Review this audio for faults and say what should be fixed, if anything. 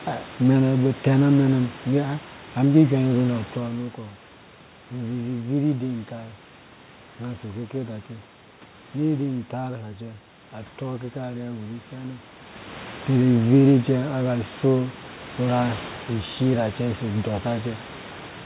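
Nothing needs fixing here.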